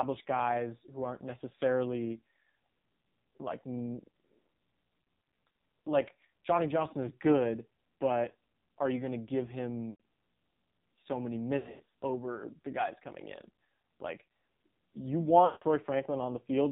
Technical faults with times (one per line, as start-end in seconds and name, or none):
0.00-16.72 AMR narrowband mobile codec
9.90-9.98 lost AMR speech frames
11.58-11.82 lost AMR speech frames
15.46-15.64 lost AMR speech frames